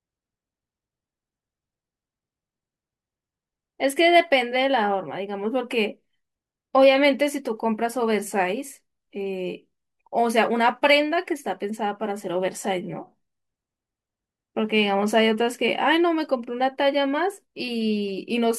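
Nothing is technically wrong with this speech recording.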